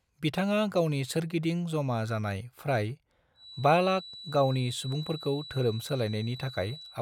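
It's a speech recording, and from 3.33 s right through to the end at 7.01 s there's a feedback whistle: a thin, steady 3.9 kHz tone sitting roughly 15 dB under the voice, swelling and fading slowly in level. Likely the speaker-to-mic loop is hovering just short of full runaway feedback.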